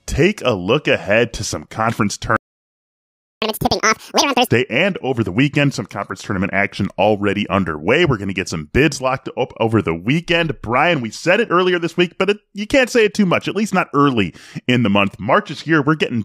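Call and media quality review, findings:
Playback stall, 2.36 to 3.42 s, right after "ahead to some conference": output cuts mid-flow to silence for about 1.05 s. Likely player buffer underrun or blocked audio thread. Waveform shows a flat silent gap; spectrogram shows a clean vertical blank band.

Catch-up at higher speed, 3.42 to 4.47 s, ending before "and over the weekend": backlog resampled at 2x to recover lost time, raising tempo and pitch by roughly ten semitones. Spectrogram shows harmonics shifted upward and compressed in time; waveform shows denser cycles.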